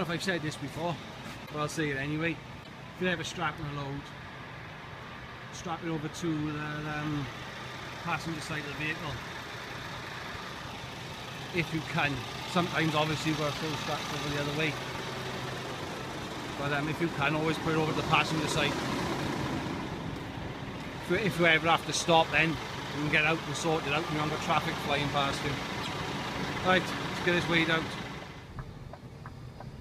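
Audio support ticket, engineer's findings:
Broken MP3 bit reservoir, three hits: 1.45–1.51 s, 2.63–2.68 s, 25.82–25.88 s. Each is a roughly 54 ms glitch with the audio jumping ahead, about two 26.1 ms frames long. Likely cause is frames cut from the MP3 stream. The frame after each cut reads its borrowed bits from another frame's bytes, so the first frames decode as junk.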